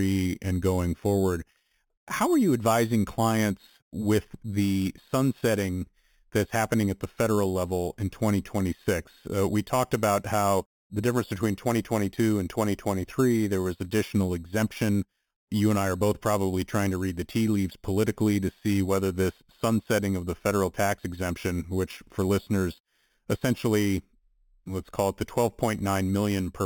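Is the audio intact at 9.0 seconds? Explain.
No. At 9.0 s, as throughout, imaging from sample-and-hold upsampling adds a metallic fizz about 18 dB down. Each sample of 8 kHz audio was repeated to reach 48 kHz, so a spectrogram shows mirrored speech between 4 and 8 kHz, moving opposite to the pitch, and the waveform shows staircase steps.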